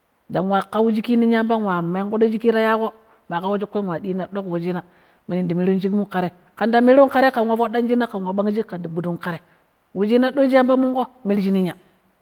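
No technical faults are audible.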